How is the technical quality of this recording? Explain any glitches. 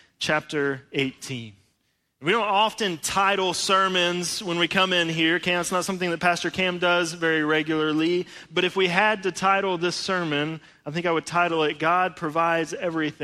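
Nothing stood out as a glitch or technical problem when listening to this recording.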